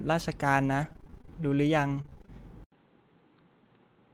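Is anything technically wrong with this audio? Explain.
Yes, three kinds of fault are audible in this speech.

Repeated packet loss (robotic sound), 0.81 to 1.29 s and 2.02 to 2.30 s: audio kept failing to arrive, and each hole was patched by stretching the preceding sound. This gives rapid bursts of choppy speech with pieces missing. Holes reach 22 ms and then 28 ms, and concealment covers 37% and then 50% of each span.

Jitter buffer slow-down, 1.30 to 1.56 s: a depleted receive buffer rebuilt its reserve by repeating short stretches of the waveform. This adds 43 ms, so the speech plays at 86% speed without any change in pitch and sounds drawn out.

Input switched to a poorer device, from 2.64 s to the end: after an 80 ms silence the sound turns dull, with nothing above 4.3 kHz. It is about 5 dB quieter and carries new background noise roughly 35 dB below the speech. This is likely a change to a narrower-band microphone or headset profile.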